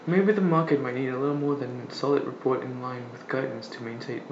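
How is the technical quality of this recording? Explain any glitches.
The recording's technical quality holds steady throughout, with no glitches, dropouts or other faults to explain anywhere in the signal.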